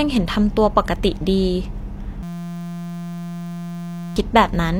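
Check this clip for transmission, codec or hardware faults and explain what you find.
There is one hardware fault in the speech. From 2.23 to 4.16 s, a steady 172 Hz buzz replaces the audio. This is a system hang loop: while the system froze, the sound hardware kept replaying one 5.8 ms slice, which fits a 256-sample ring buffer. About two seconds of speech is lost.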